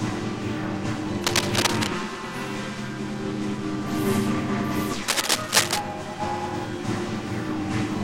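Scratching and rustling bursts break over the sound from 1.24 to 1.87 s, about as loud as the sound itself, and again from 5.08 to 5.78 s, somewhat louder. This is cable scratch noise, likely from a worn cable or connector being moved, its contact resistance jumping erratically.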